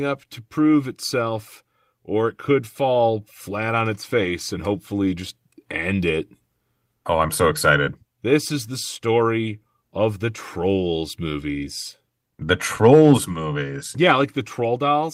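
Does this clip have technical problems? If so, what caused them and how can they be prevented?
Yes. From 4.21 to 4.31 s, a lost packet rebuilt from error correction: redundant low-bitrate copies fill the gap, consistent with three lost packets, sounding briefly rough and noisy. Reducing network packet loss, for example with a wired link, prevents it.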